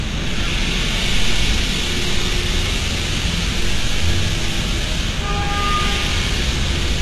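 Right from the start and all the way through, the treble sounds synthetic: bright but gritty and metallic, with nothing at all above 12.3 kHz. That's likely HE-AAC compression at a very low rate, something like 16 kbps, rebuilding the top end from copied lower bands, so the damage is plainly audible.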